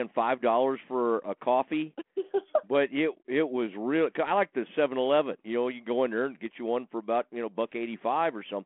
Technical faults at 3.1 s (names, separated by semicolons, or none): none